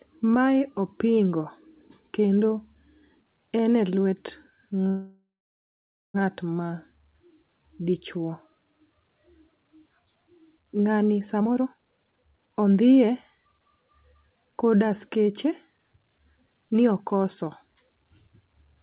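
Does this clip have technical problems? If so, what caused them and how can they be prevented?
Yes. There is a call audio freeze from 4.88 to 6.16 s. The sound stops moving forward. The last sound is drawn out, then goes silent for about 0.9 s. It is likely caused by packets held up on the network, leaving the jitter buffer empty. The receiver filled about 1.26 s this way. Nothing is lost. When the packets arrive, the sound resumes where it stopped. The whole call now runs about 1.26 s later. Preventing it means giving call traffic a steadier network path, with priority marking and less congestion on the link.

There is a jitter buffer speed-up from 11.40 to 14.83 s. The buffer is holding more sound than it aims for. To catch up, the receiver cuts out many tiny pieces, each a pitch period or a few long. The speech runs at about 137% speed and sounds hurried. The pitch stays the same. Roughly 1.5 s of audio is dropped over this stretch. 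A steadier network path prevents it too: with fewer delayed packets arriving together, the buffer does not swell and need not shed audio. Throughout, the call codec passes nothing above 4 kHz, which fits narrowband G.711.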